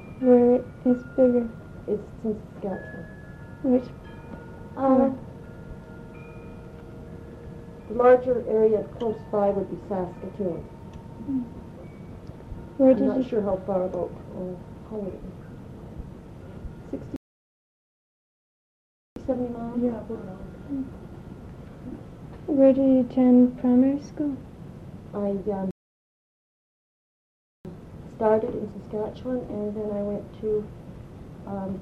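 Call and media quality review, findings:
Playback stall at 17.16–19.16 s (2.0 s) and 25.71–27.65 s (1.94 s): output drops to silence mid-flow, then resumes. Likely player-side buffer underrun or blocked playback thread, with no data reaching the output until the player recovers.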